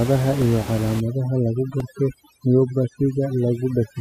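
At 0.42 s there is a repeated buffer. New audio arrived late, so the device played its last block again, once. The block is only about 1.5 ms long, which fits a 64-sample buffer. It is heard as a click or brief buzz.

From 1.00 s to the end, overdone noise removal takes hold. The room noise sits about 12 dB below the speech. A noise reducer set too strong cuts away frequency bands near that level, and quiet parts of the speech go with them. The background drops and breaks up into twinkling specks.

At 1.80 s the repeated buffer returns. This time the same tiny block plays two extra times. Each repeat has a hard join, and the pair gives a click or brief buzz.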